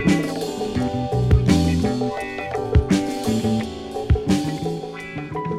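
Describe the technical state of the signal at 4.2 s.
At 4.2 s the signal is intact, with no audible dropout, distortion or other technical fault at that moment.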